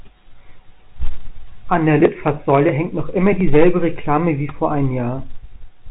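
A short speech clip carried over a telephone-band channel, with hard clipping from 3.26 to 3.69 s, where the level runs about 6 dB past what the chain can pass. The peaks are sliced flat, leaving a crackle riding on the loudest syllables. Soft saturation would round the peaks and thicken the sound gently instead. The clipping also differs from the telephone coding's faint grain, which tracks the level everywhere rather than erupting only on peaks, and which stays below 4 kHz.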